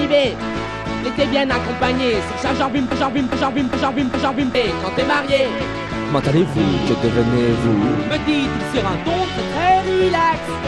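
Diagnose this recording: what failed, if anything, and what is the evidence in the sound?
Broken-record loop, 2.91 to 4.55 s: a 0.41 s fragment repeats four times back to back, likely a stalled stream buffer resending its last block.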